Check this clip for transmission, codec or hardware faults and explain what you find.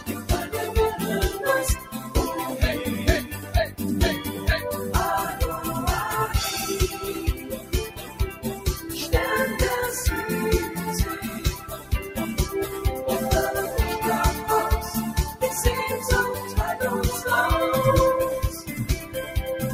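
One processing fault is present: a speech-tuned noise suppressor was left running on non-speech sound, and in several places it pulls particular passages down hard.

Throughout the clip, the noise suppressor applied to music or sounds treats steady or sustained content as noise. It lowers that content by up to around 10 dB while sharp onsets pass, so levels pump and tails thin. Unlike codec dropouts, nothing disappears abruptly. It sinks in level.

Sound cut by the noise suppressor occurs at 0.0–0.53 s, 1.79–2.13 s, 3.31–3.8 s, 7.34–7.73 s, 7.89–8.66 s, 11.23–12.17 s, 18.52–18.74 s and 18.99–19.34 s. Each passage is drawn down by about 7 to 10 dB, with decays shortened and attacks kept. This separates it from gating or packet loss.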